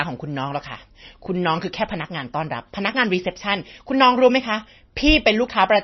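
Throughout the speech, heavy MP3 compression is the likely cause: an encoder starved of bits, consistent with about 24 kbps, removes everything above about 5.9 kHz and drops weak frequency lines frame by frame, leaving dull, watery, swirling sound with chirpy sibilants and smeared attacks.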